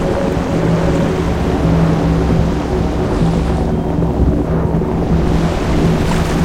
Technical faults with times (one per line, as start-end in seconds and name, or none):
none